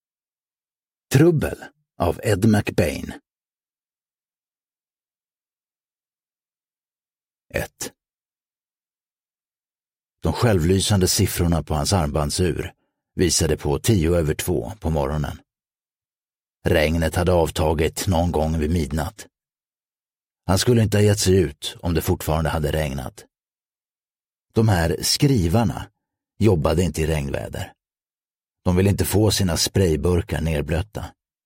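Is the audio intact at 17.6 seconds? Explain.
Yes, the audio is intact at 17.6 seconds, with no dropout, click, distortion or other fault at that moment.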